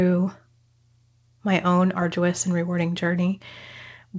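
A speech recording with no technical faults. It has passed through a WebRTC call path, and nothing is heard above 8 kHz, which fits a wideband codec such as G.722.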